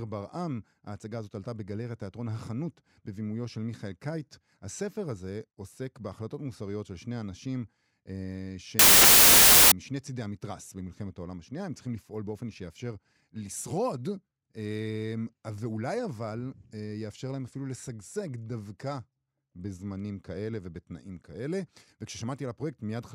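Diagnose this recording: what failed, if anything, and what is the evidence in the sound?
Sample-format conversion failed: samples built from the wrong bytes. From 8.79 to 9.72 s the speech becomes loud, harsh broadband noise, because misassembled bytes turn the low bits into large values.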